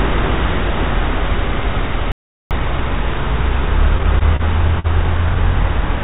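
At 2.12 s the sound cuts off abruptly into dead, total silence, with no background hiss or room tone, and it resumes just as suddenly at 2.51 s. That is an audio dropout to silence lasting about 0.39 s. The most likely cause is that the input signal was lost, through a disconnected source, a broken link or an accidental mute, while recording or encoding carried on writing silence. Whatever occurred during that gap is simply gone.

From 3.98 to 4.41 s the audio stumbles and drags through four brief hitches. In each, the sound just before is held on for a moment, the longest hold lasting 30 ms. This is repeated stalls, or stutter. Packets arrived late often enough that the jitter buffer kept running dry, and the receiver stretched the last sound each time, covering 53 ms in total, about 12 percent of that stretch. Nothing is lost, but the flow is uneven.

At 4.79 s a single sound hangs on for about 49 ms, with a faint buzzy or dipped quality, before the audio picks up exactly where it left off. 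This is a short stall from a late packet. One packet came about 49 ms behind schedule, so the jitter buffer emptied and the receiver extended the previous sound to bridge the wait. No content is missing. All of this arrives through a call path whose band stops at 4 kHz, which fits G.711 A-law at 64 kbps.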